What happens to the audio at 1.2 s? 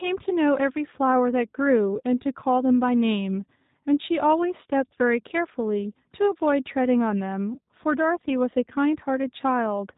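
At 1.2 s the speech carries G.729 codec damage, as it does for the whole clip. The codec does not store the waveform. It sends a vocal tract filter, a pitch predictor and a few pulses for each short frame, and the decoder rebuilds speech from them. The result here is plainly rough and synthetic. Nothing above 3.8 kHz survives, so the sound is narrow and muffled. This fits a low-rate 8 kbit/s VoIP link.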